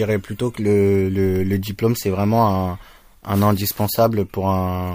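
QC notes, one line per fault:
Nothing to flag here; this speech recording gave me no technical faults to log.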